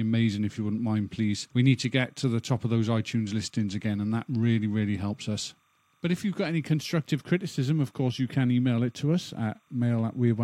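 From start to finish a timecode bleed runs underneath the speech: linear timecode from a neighbouring track or cable has leaked into the audio path. Its square wave flips between tones near 1 kHz and 2 kHz, repeating its pattern 30 times a second, and sits roughly 40 dB below the speech as a faint chirping warble. Unlike a steady whine or hum, it never holds one pitch, warbling in a regular frame rhythm.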